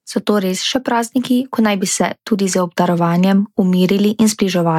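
No technical faults can be heard in the speech, so there is nothing to describe in time order.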